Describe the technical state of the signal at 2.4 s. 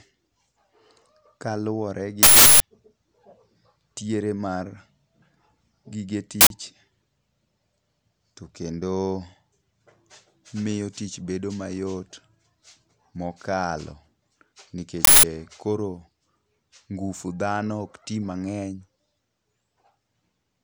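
At 2.4 s the signal is inside an uninitialised buffer fault running from 2.23 to 2.60 s, about 0.37 s, which fits a 16384-sample block. That block was sent to the output before any audio had been written into it, so stale memory contents played as samples: a sudden, very loud burst of harsh digital noise replacing the speech. On a waveform it appears as a dense slab far above the surrounding speech with abrupt vertical edges; a spectrogram shows a broadband rectangle with sharp start and end.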